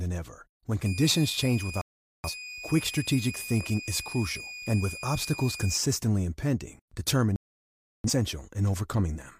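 From 0.86 s to 5.77 s there's a switching supply whistle, a thin tone wandering between 2.43 and 2.49 kHz, about 10 dB below the speech, from a power supply running in an audible burst mode. Over the top at 1.81 to 2.30 s, and again after it at 7.36 to 8.10 s, come digital broadcast dropouts: the receiver lost valid frames and muted, so the speech just vanishes for roughly half a second and then three quarters of a second.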